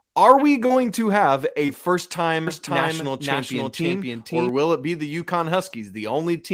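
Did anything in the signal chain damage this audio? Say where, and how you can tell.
Yes. From 2.47 s to 4.49 s the speech carries a doubled audio track: a second full-band copy runs roughly half a second behind, at about the same level as the original, and cuts in and out abruptly at those edges. This most likely comes from a second, slower capture path or an editing step that left two out-of-step copies. It differs from acoustic echo or reverb because the repeat has no decay, no room colouring, and doesn't trail away.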